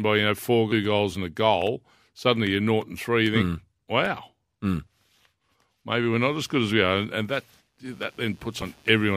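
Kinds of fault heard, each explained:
Compressed frames skipped: Whole chunks of the encoded speech never get played, either because they're missing from the file or because the decoder rejected them as damaged, so the audio jumps forward. It happens at 0.72 s, losing roughly 400 ms, and again at 8.62 s, losing roughly 700 ms. Both gaps fit a frame length of about 93 ms.
Computer activity noise: Shifts in load on the processor, graphics card or mouse disturb the ground the audio circuit shares with them, and that leaks into the recording as electrical noise. Here it comes in at 6.21 s and runs to the end as a buzzy, chirping texture pulsing at around 150 Hz, sitting about 35 dB below the speech. It follows the machine's activity rather than anything in the sound itself.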